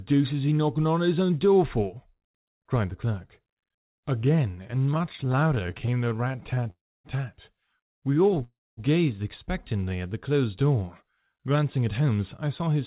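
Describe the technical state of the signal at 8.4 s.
Packets reaching the receiver late caused repeated stalls (stutter) from 8.24 to 8.43 s: the jitter buffer emptied four times, with the longest gap about 12 ms, and each time the last sound was stretched to cover it. Nothing is lost, but the speech drags and catches.

A call audio freeze follows from 8.43 to 8.80 s. The buffer ran dry for about 340 ms, likely because packets were held up in transit. The last sound is extended and fades into roughly 230 ms of silence, then the speech resumes exactly where it stopped, now running about 340 ms later.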